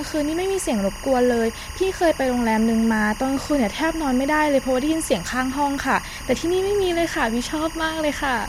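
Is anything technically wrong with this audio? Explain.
Yes. Timecode bleed runs through the whole speech clip: linear timecode, which fits 24 frames per second, leaks in as a square wave flipping between roughly 1 kHz and 2 kHz. It sits around 15 dB below the speech as a chirping warble. Unlike a steady whine, it alternates between two pitches an octave apart.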